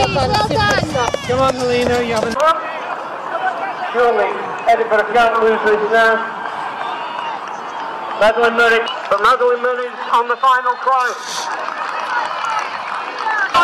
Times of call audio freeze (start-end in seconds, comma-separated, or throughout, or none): none